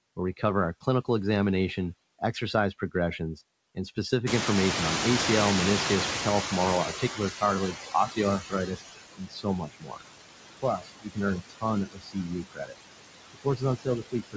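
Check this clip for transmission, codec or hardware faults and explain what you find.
The faults here all come from a noise suppressor struggling against loud room noise. The audio passes through a wideband call path with nothing above 8 kHz, which points to a codec such as G.722.

Noise suppressor artifacts run through the whole clip. The suppressor cuts bands it judges to be steady noise by about 19 dB, frame by frame, so the leftover background sinks between the words and rises under them. Unlike a one-off event, this texture is constant.

Noise suppressor catching up begins at 4.26 s, just after "examination exercise progressions and". The room noise jumps by about 23 dB around 4.5 s, and the suppressor's noise estimate lags. The noise comes through with less reduction at first, then sinks by about 14 dB as the estimate adapts over roughly 4.5 s, until 8.72 s. What distinguishes it is a gradual fade of the background, not of the speech.

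Speech cut by the noise suppressor happens at 6.98–7.2, 7.73–8.18, 8.39–8.82, 9.15–10.02, 10.58–11.18, 11.36–11.65, 11.85–12.75 and 13.34 s to the end. With the room noise now only about 6 dB below the speech, the suppressor mistakes parts of the speech for noise and drops them by about 13 to 22 dB, in stretches of up to about a second each. Syllables sound swallowed or faint, turned down along with the background.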